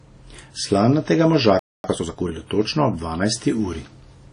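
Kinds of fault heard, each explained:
WMA compression: The speech carries a ringing, washy smear with a hiss that swells and fades with the signal. This likely comes from a low-bitrate transform codec. Unlike plain low-pass filtering, the damage moves with the sound and doesn't simply dull it.
Playback stall: From 1.59 to 1.84 s the audio stops dead in mid-flow for about 250 ms, then resumes. The likely cause is the player running short of data. This is a full silence rather than a dropout of a few milliseconds or a click.
Time-compressed catch-up: From 1.84 to 2.32 s the speech runs about 1.5 times fast at its normal pitch. Small pieces are cut out and cross-faded to clear the backlog. Faster tape-style playback would raise the pitch instead.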